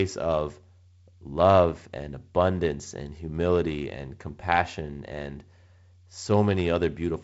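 Nothing faulty is audible anywhere in this speech recording.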